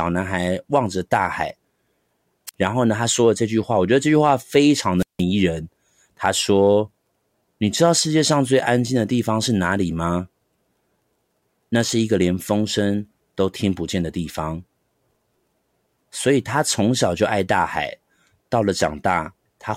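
At 2.47 to 2.54 s and again at 4.98 to 5.23 s, the speech shows a wireless microphone squelch dropout: the radio link weakens, hiss swells, then the receiver mutes, leaving holes of 50 ms and 168 ms before the voice resumes.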